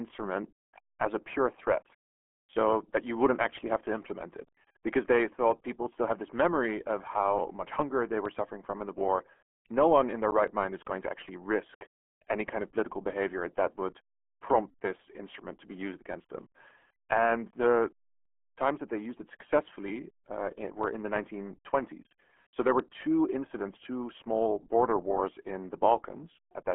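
From start to finish the speech carries RealAudio 14.4 codec damage, which fits an 8 kbit/s dial-up codec: nothing above 3.8 kHz, a band near 250 Hz to 3.4 kHz, and heavy gargly, muffled smearing. That churning texture separates it from a clean telephone band limit.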